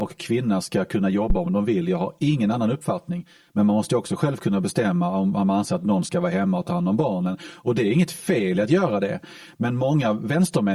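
Channel delay (comb filtering) runs through the whole clip. One side arrives around 5 ms late, and summing to mono notches the spectrum from around 100 Hz upward, so the speech sounds hollow and phasey. At 1.30 to 1.36 s, between "kvinna ska kunna" and "om de vill", a phantom power thump lands: a supply step through the input coupling gives a deep low-frequency knock that decays in about 13 ms.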